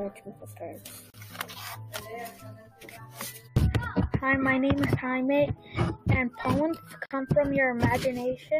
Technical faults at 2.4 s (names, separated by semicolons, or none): none